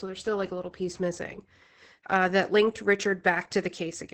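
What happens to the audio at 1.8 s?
At 1.8 s the speech carries heavy Opus voice compression, present through the whole clip. The SILK coder keeps only a wideband range up to 8 kHz and codes the excitation coarsely. The voice sounds muffled, hoarse and slightly robotic, which fits a bitrate around 10 kbps.

Sample clock jitter also runs throughout. The converter's timing wanders by a fraction of a microsecond, so samples land slightly off time. The error tracks the waveform's slope, giving a faint hiss or roughness roughly 45 dB below the speech. It rises on loud, bright sounds.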